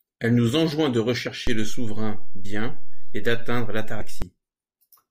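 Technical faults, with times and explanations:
1.26, 2.44 to 2.46 and 4.0 s, compressed frames skipped: three short jumps where the decoder simply didn't play some frames, either because they were missing or it threw them out as damaged. The speech lurches forward by roughly 20 ms at the first two and around 50 ms at the third, a whole number of frames each time.
1.47 to 4.22 s, DC step: the waveform's zero line jumps at 1.47 s, holds at that offset, and drops back at 4.22 s, much like an input carrying an offset being switched in and then out again. You get a low thump at each edge. The speech between them carries on unchanged, since a steady offset sits below anything audible and only the sudden shifts themselves make a sound.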